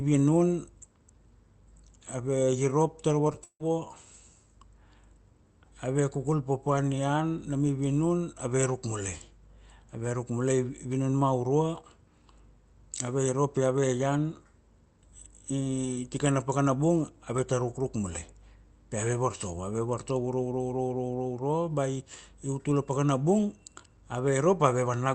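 Just after "ave irop ta ra", two brief smears break the speech, at 3.27 to 3.31 s and again at 3.33 to 3.36 s, each a wobble where the sound stretches unnaturally. These are short concealed packet losses: about 20 ms of audio arrived too late each time, and the receiver bridged the gap by extending the preceding sound for roughly 11 to 13 ms before blending back into the real signal.

Moments later, from 3.44 to 3.62 s, the speech gives way to a fading buzz that trails into about 70 ms of silence before the audio resumes with something missing. This is most likely a long network dropout. Around 160 ms of audio never arrived, and the receiver stretched the last sound for about as long as it could before letting it die away. Throughout, the speech carries a band limit at 8 kHz from the Opus call path, which fits a 32 kbps stream.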